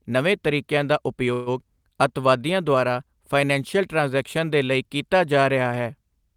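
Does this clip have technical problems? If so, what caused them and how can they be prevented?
Yes. A call audio freeze occurs from 1.33 to 1.49 s, right after "ਨਵੇਂ ਤਰੀਕਿਆਂ ਦਾ": the last sound is stretched into a fading buzz for about 130 ms, after which the speech resumes where it stopped, so nothing is lost but everything after is 130 ms later. The likely cause is delayed packets draining the jitter buffer. On a spectrogram this appears as flat, smeared horizontal bands continuing the previous frame and fading out, and on the waveform as a dull repetitive stretch with no new onsets. A larger or adaptive jitter buffer and a steadier network path would prevent it.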